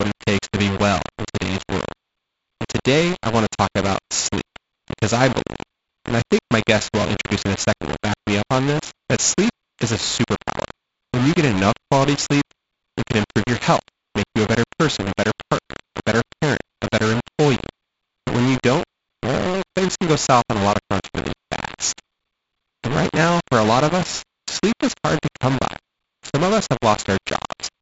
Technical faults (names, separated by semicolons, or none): low bit depth without dither